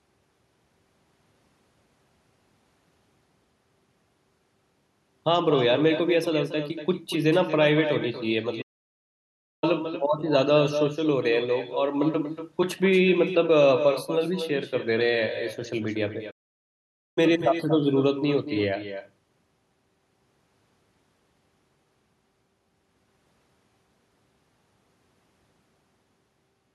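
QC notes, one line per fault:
Throughout: echo with no canceller. Every phrase is followed about a fifth of a second later by a fainter, thinner copy, around 10 dB down. That's the far end's loudspeaker feeding back into its microphone, with nothing there to cancel it before it returns to us.
8.61 to 9.64 s and 16.30 to 17.18 s: playback stall. The speech drops out mid-flow for about 1.0 s and then 0.86 s before picking up again. Most likely the player ran dry of data or got blocked, so the output just sat silent until it caught up.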